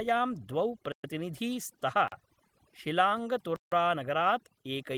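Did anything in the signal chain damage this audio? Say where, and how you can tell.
Yes. Overdone noise removal runs through the whole clip, at the call-processing stage. The background drops and breaks up into twinkling specks. A suppressor pushed too hard is clamping individual frequency bands whenever they drop close to its noise estimate, so quieter parts of the voice are cut along with the noise. The light smoothing of the Opus hybrid coding at 24 kbps sits underneath that, separate from it.

Blocks of digital silence appear at 0.92 to 1.04 s (120 ms), 2.08 to 2.12 s (40 ms) and 3.56 to 3.72 s (160 ms), which points to the driver or buffer stage. Each one drops abruptly to silence and returns with no fade, leaving a short hole. Even the shortest is long enough to be heard as a short hole and not a tick. Hard-edged gaps of this kind fit output buffers that were not filled in time.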